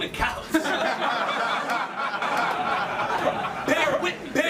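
From about 2.22 s to the end there's a doubled audio track: a second, roughly equal-level copy trails by around 0.7 s, likely a slower capture path.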